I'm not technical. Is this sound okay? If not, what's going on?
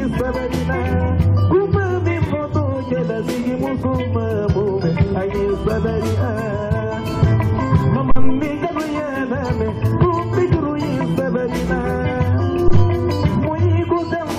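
No. There is a phantom power thump at 8.11 s and again at 12.68 s, each a deep thump fading in well under a tenth of a second. It happens when phantom power or another supply feeding the input is switched on or off mid-recording.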